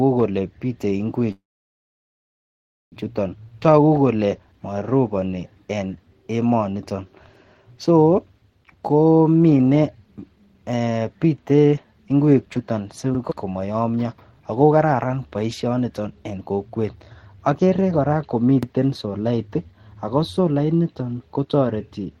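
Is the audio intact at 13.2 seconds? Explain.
No. From 13.15 to 13.20 s the speech stutters, with a brief click as 50 ms of audio plays twice. This is overlapping chunks: the audio was handled in 6.0 s blocks, and the next block began before the previous one ended.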